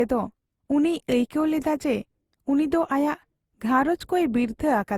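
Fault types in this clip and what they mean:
Generation loss: swirly, hollow speech with blurred onsets, likely from roughly seven Opus passes near 64 kbit/s; spectrogram shows smeared transients below 20.2 kHz.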